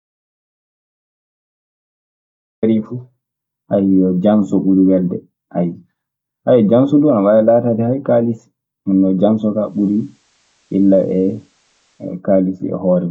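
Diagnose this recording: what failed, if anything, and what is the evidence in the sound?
The recording opens in dead digital silence that is already under way at 0 s and lasts until 2.63 s, when the speech cuts in abruptly mid-flow. The gap holds no room tone or noise floor at all. This is an audio dropout to silence, likely from the input path at the analogue wiring or capture stage losing its signal while the recorder kept writing empty samples. Whatever preceded 2.63 s is unrecoverable.

From 9.52 s to 12.22 s a faint hiss rises well beneath the speech, with no change in level. The switch is a smooth cross-fade rather than a hard cut, taking 294 ms. This is digital radio blending to analogue: the hybrid receiver lost the digital stream, faded over to the FM simulcast, and blended back once reception returned.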